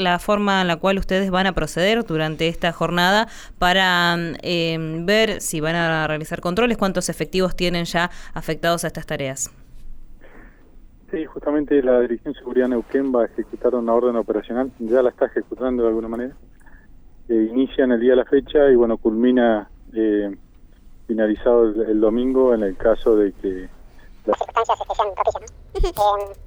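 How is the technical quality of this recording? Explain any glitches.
There is one glitch near the end. From 24.33 s to 26.46 s there is a section at the wrong speed. It plays at twice its proper rate, likely from a wrong clock in playback or editing. The sound turns hurried and jumps roughly ten semitones higher.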